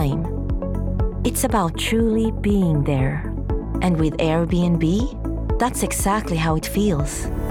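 From about 1.75 to 3.36 s there's channel delay comb filtering: one side lags a few samples, so mono cancels a notch near 5 kHz, sounding hollow and phasey.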